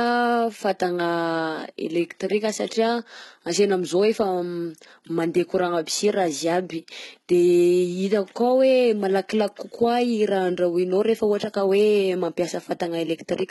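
A speech clip carrying heavy HE-AAC compression damage for its whole length: s sounds come out gritty and lispy, and the treble sounds synthetic, likely from spectral band replication at a low bitrate, around 16 kbps. A spectrogram shows blocky, repeated upper bands above the crossover and nothing at all above 11.8 kHz.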